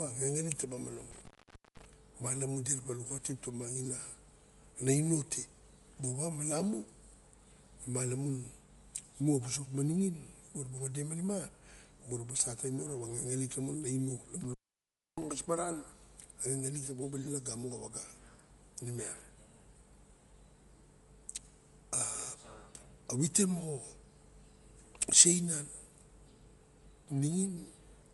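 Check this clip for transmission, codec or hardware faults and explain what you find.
The speech carries codec damage throughout and drops out twice from intermittent contact.

Across the whole clip there is nothing above 11.5 kHz, and the upper band sounds grainy and breathy. The likely cause is Bluetooth LC3 compression, which fits 10 ms frames at around 48 kbps. The transform codec discards detailed high-frequency content and substitutes shaped noise, so the damage is plainly audible.

Intermittent contact breaks the signal from 1.11 to 1.93 s, with the line open for about 0.49 s, and again from 14.41 to 15.23 s, open for about 0.63 s. A loose connection opens the path, so the sound cuts out, with crackle where the contact breaks and remakes.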